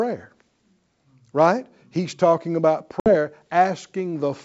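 At 3.00 s, after "talking about", packet loss on an ADPCM call cuts a 60 ms hole. The out-of-step decoder distorts speech until 3.15 s.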